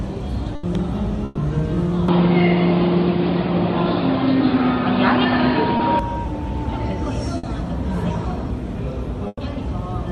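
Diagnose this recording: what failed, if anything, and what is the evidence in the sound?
Burst of packet loss, at the network stage: four gaps at 0.55–0.65 s, 1.25–1.39 s, 7.37–7.45 s and 9.27–9.39 s. In each one the receiver extends the last sound for 60 to 120 ms while fading it, then jumps ahead with that stretch lost. At 9.27 s the fill runs out into about 30 ms of silence. On a spectrogram each appears as a frozen, smeared band pattern that decays and then cuts abruptly to new content. The waveform shows a dying repeat and then a discontinuity.

From 2.08 s to 5.99 s the sound turns dull and boxy, with nothing above 5 kHz. There is no dropout at either boundary, the level shifts by roughly 5 dB, and a new noise floor sits far below the signal, around 45 dB down. This points to the input stage: the capture likely switched to a poorer device. A spectrogram shows a flat ceiling at 5 kHz across that span, well below the call codec's own limit near 12 kHz.

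Short concealed packet loss, also a network fault, occurs at 5.77–5.81 s, inside the narrowband stretch. About 20 ms never arrived, and the decoder patched it by continuing the preceding sound and then blending back in. It is heard as a tiny smear or wobble. On a spectrogram it is a thin vertical slice where fine detail blurs. In the waveform it is a short section of continued signal with a slight join.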